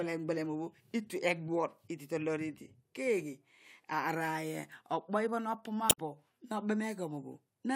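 A short glitch cuts into the speech from 5.87 to 5.98 s, about a tenth of a second. This is damaged data in a compressed stream: corrupted frames there made the decoder lose sync and hunt for the next valid frame header.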